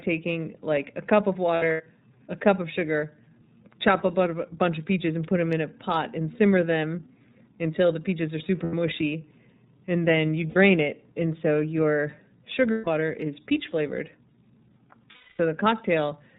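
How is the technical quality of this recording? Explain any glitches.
The technical quality is limited: the speech has passed through a narrowband codec, and there are five short dropouts.

iLBC codec, throughout: each frame's excitation is coded independently. Nothing above 4 kHz survives, so the speech sounds muffled, slightly rough and synthetic. The coding damage is plainly audible, which fits iLBC's 13.33 kbps mode with 30 ms frames.

Lost iLBC frames, at 1.56 to 1.82 s, 8.63 to 8.74 s, 10.47 to 10.57 s, 12.71 to 12.88 s and 15.12 to 15.40 s: when packets went missing, the decoder filled each gap by repeating the last pitch cycle mixed with noise, fading over the longer gaps. Each gap sounds like a held, faintly buzzy vowel.

The first gap totals 150 ms, scattered over about 240 ms, with the longest stretch around a tenth of a second. The second comes right after "until the peaches are" and lasts 90 ms. 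The third, also 90 ms, falls between "and then you" and "it and so your". The fourth, 150 ms, sits between "it and so your" and "is peach flavored". The last is the longest at 270 ms. Because iLBC frames stand alone, the speech recovers almost immediately after each gap.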